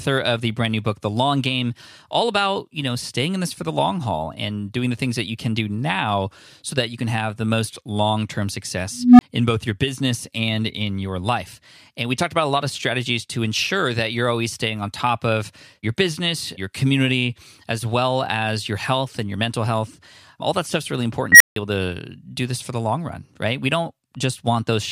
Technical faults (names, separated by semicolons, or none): unstable filter